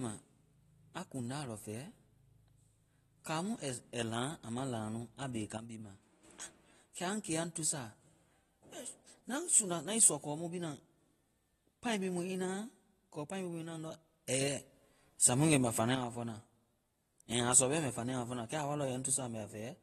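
Throughout the speech, AAC compression is plainly audible: nothing reaches above 12.4 kHz, and sibilants and sustained vowels take on a smeared, fizzy, warbling texture. The likely cause is the encoder running short of bits, which fits AAC-LC at about 32 kbps.

A sudden gain jump at 5.57 s drops the level by about 8 dB until 6.25 s. Another at 14.28 s raises it by about 6 dB until 15.95 s, just before "wa fɔna". Each time, voice and background shift together, likely from gain applied without a ramp.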